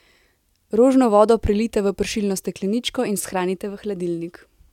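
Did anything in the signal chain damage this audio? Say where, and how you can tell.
No, nothing along the signal chain has audibly damaged this speech recording.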